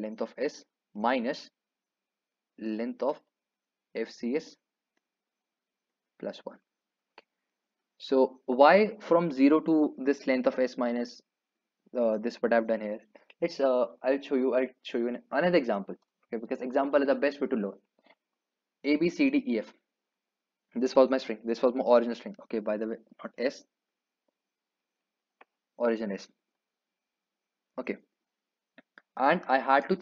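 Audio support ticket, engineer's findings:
No audible faults found on review.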